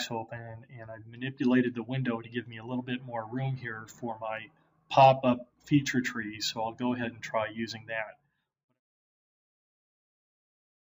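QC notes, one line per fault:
No technical faults are present, and the level eases down in a smooth, editor-style fade-out from about 7.5 s to 8.81 s, with no click or hard edge.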